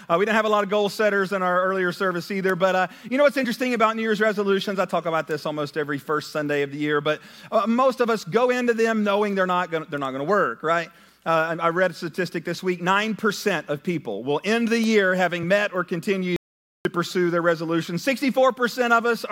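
A single audio dropout to silence runs from 16.36 s to 16.85 s, so roughly half a second of the sound is simply missing. The audio stops abruptly mid-flow and resumes just as abruptly. The gap is silent with no room tone at all, which sets it apart from a natural pause or a noise gate closing. The likely cause is a momentary loss of input while recording continued and wrote silence.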